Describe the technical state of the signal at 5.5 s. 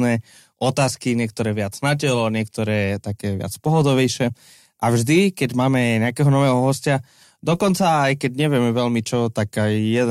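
At 5.5 s the speech signal is intact, with no dropout, clipping, distortion or other fault to be heard.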